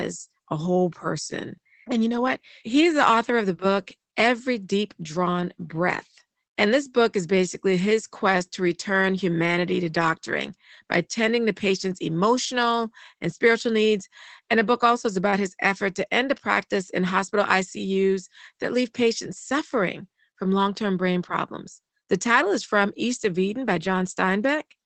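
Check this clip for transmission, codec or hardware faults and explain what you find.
The clip has one fault: Opus voice compression, audible across the whole speech clip.

Throughout, the speech sounds muffled and a little hoarse, with a faintly robotic edge, and nothing reaches above about 8 kHz. This is the SILK speech coder in Opus at a low rate, which fits roughly 12 kbps in 20 ms frames. The codec keeps only the wideband range and models the voice with a coarse linear-prediction excitation, so fine detail is lost.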